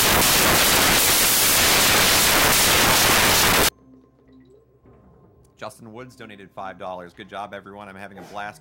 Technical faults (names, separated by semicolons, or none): samples built from the wrong bytes